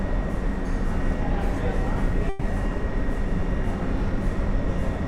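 At 2.29 s there's a burst of packet loss: about 120 ms goes missing, and the receiver stretches the last sound into a fading smear before jumping ahead.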